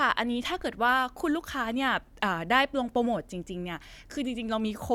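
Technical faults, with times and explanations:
No technical faults detected.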